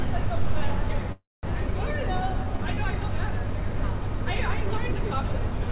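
At 1.12 s there's a call audio freeze until 1.45 s: the last sound smears into a fading buzz, then about 200 ms of silence, likely packets held up and the jitter buffer running empty. Nothing is lost; about 310 ms is inserted.

At 1.67 s comes a skip ahead: roughly 70 ms drops out and the two sides butt together almost seamlessly, so the sound jumps forward.

From 1.96 to 2.75 s there's a jitter buffer slow-down, with short periods repeated to rebuild the reserve. Playback runs at 90% speed with pitch unchanged and stretches by 86 ms.

At 3.01 and 4.14 s you hear a dropped buffer (overrun), a jump each time, likely samples overwritten before being read. Roughly 40 ms and then 20 ms go missing.

Throughout, the narrowband call path shows: nothing above 4 kHz, which fits G.711 mu-law.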